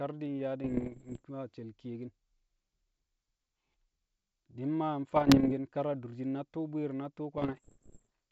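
Throughout the clip, a block size mismatch (truncated) means one stage writes longer blocks than the next reads, so each block's tail is discarded. The spacing fits a 1024-sample block. It produces a steady buzz at 46.9 Hz, with no audible change in speed or pitch.

From 0.64 to 1.25 s, bit errors on an ADPCM link corrupt the G.722 stream at a rate of around one and a half percent. Each flipped bit also throws off the decoder's step size and predictor, so the damage rings on briefly as pops, rough bursts and short jumps in level.

The same ADPCM bit errors return from 5.16 to 5.53 s, just before "kar adurshin na tṵṵ", at roughly one percent. They are heard again as pops and gritty bursts with brief level swings.

A third burst of ADPCM bit errors runs from 7.38 to 8.09 s, again near one percent. Pops and rough, unsteady level changes carry through this stretch.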